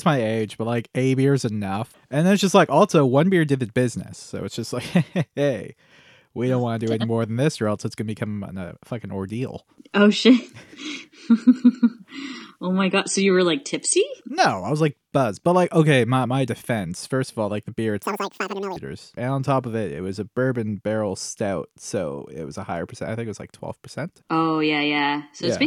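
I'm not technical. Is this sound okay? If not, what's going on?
No. Audio read two samples at a time (double speed) hits from 18.03 to 18.77 seconds, just after "all like the beer" and before "and on top of". The playback treats each pair of samples as one, as if the stream held two channels, so that stretch of speech runs twice as fast and jumps a full octave (12 semitones) higher, sounding squeaky and chipmunk-like.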